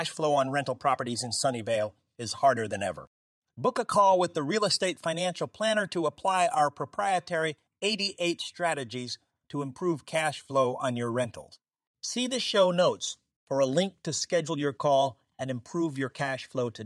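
No technical faults are audible.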